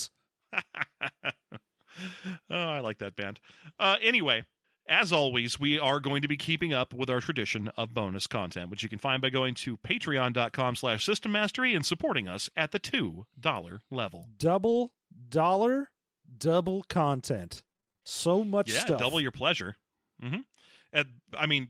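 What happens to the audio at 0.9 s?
Nothing goes wrong at 0.9 s; the speech carries on intact through that moment.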